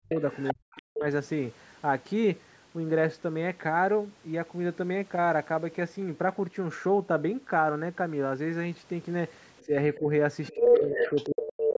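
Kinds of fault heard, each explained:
Speech suppressed in double talk: At 0.0–0.14, 0.53–1.06, 9.66–10.06 and 10.51–11.77 s, the talker's speech sinks sharply. The first two dips are very deep, around 40 dB, the one near 9.7 s is mild, and the final stretch drops by roughly 25 dB for about a second in total. These dips overlap a second voice, so the likely cause is an echo canceller that couldn't tell its own talker from the loudspeaker echo and turned everything down.
Other side's voice leaking through: A second voice is audible from 0.1 to 0.82 s at nearly the talker's own level, faintly from 9.58 to 9.98 s at around 35 dB down, and from 10.45 to 11.76 s slightly louder than the talker. This is likely the far end playing through the talker's loudspeaker and reaching the microphone because the echo canceller didn't fully subtract it.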